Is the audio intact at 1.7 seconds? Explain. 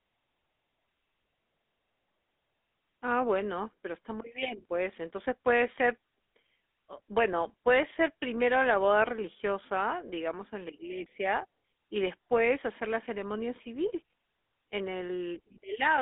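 No. At 1.7 seconds, as throughout, the speech has a buzzy, gravelly roughness and a thin, boxed-in tone between about 250 Hz and 3.6 kHz. That is the GSM full-rate codec, which fits 13 kbps: it models the vocal tract and drives it with coarse, regularly spaced pulses.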